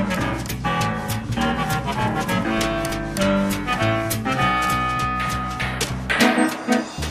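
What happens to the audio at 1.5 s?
Nothing goes wrong at 1.5 s, where the audio runs through intact with no dropout, click or distortion.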